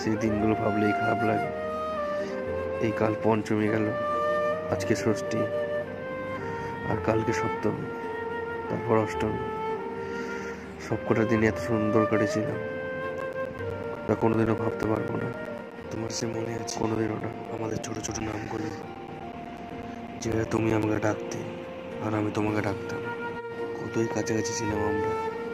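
From 13.2 s to 21.0 s the audio breaks up with periodic USB or driver dropouts: every 0.125 s, eight times a second, around 10 ms of sound is lost and replaced by silence, giving about seventy evenly spaced ticks. The strict regularity separates this from random network packet loss or stray digital clicks, and points to a background process repeatedly stalling the USB bus or audio driver.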